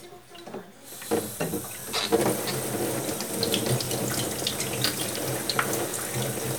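At 1.80–1.83, 2.83–2.85, 3.85–3.87, 4.87–4.90 and 5.90–5.92 s there are overlapping chunks: every 1 s chunk begins about 23 ms before the previous one ended, so that sliver plays twice, giving a regular click-stutter in the sound.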